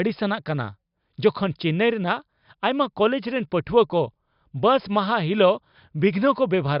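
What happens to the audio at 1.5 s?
Nothing goes wrong at 1.5 s; the speech runs on intact through that moment with no dropout, click or other audible fault.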